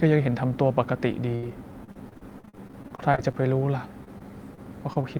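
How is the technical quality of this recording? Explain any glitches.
The recording is degraded by network packet loss in several places, ranging from one held dropout to long choppy stretches.

Burst of packet loss, 1.35 to 1.51 s: the receiver extended the last sound for about 71 ms, fading it, and then skipped ahead. Unlike a brief smear, this is a held buzz or hiss followed by a jump.

Short concealed packet loss, 1.44 to 1.47 s: a 20 ms hole, nested within that burst, is patched from the preceding sound and blended back. It is heard as a quick smear or wobble rather than a sustained tone.

Repeated packet loss (robotic sound), 1.84 to 3.43 s and 4.04 to 5.05 s: the audio has repeated gaps, each filled by continuation. There are 17 in the first span (up to 44 ms each, about 28% concealed) and 5 in the second (up to 23 ms, about 10%). Because they recur so closely, the result is choppy speech with pieces missing rather than one isolated dropout.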